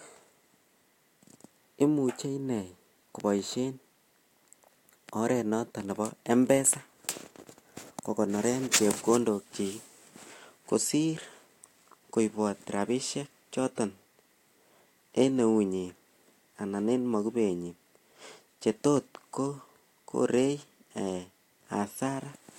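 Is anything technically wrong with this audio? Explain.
No, nothing is technically wrong.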